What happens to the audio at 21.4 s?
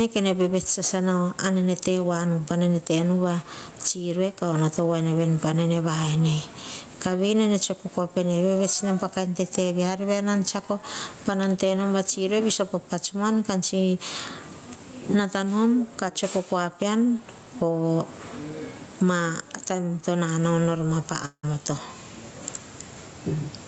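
That moment falls inside a long network dropout, which likely comes from packets failing to arrive. Right after "to nanao nor ma", at 21.25 s, the real audio stops. The receiver stretches the last bit of sound into a fading buzz or hiss, then there's a short patch of near-silence. Real audio picks up again at 21.45 s, but roughly 0.18 s of what was said is simply gone.

There's also gain pumping running through the whole clip, including this spot, with the level swinging somewhere around 15 dB. It likely comes from the mic gain being cranked way up and a fast limiter slamming it back down on every loud syllable. So loud and soft parts end up closer in level, which leaves everything squashed.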